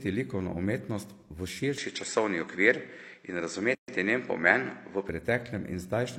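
Input switched to a poorer device, 1.78 to 5.09 s: right after "likovno umetnost v" the speech turns duller, with nothing above 8.2 kHz, a few decibels' level change and faint new noise, likely a different microphone. Gap at a join of encoded pieces, 3.75 s: separately encoded segments were joined with their padding left in, leaving a 130 ms silence with smeared edges before the speech resumes.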